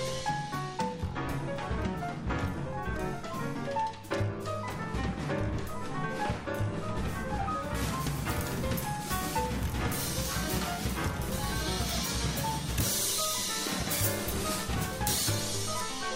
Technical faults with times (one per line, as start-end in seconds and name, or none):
7.75-16.15 pre-emphasis left on